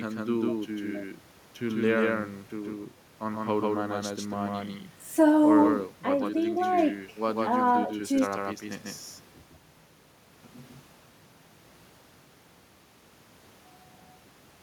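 A doubled audio track runs throughout the speech, from the first second to the end. A second full-band copy trails the original by roughly 150 ms at about the same loudness, so every syllable is heard twice as a hard, distinct slap rather than a room echo. The repeat has no decay or reverberant colour. The likely cause is the signal being captured again along a slower path, or an edit that left two copies out of alignment.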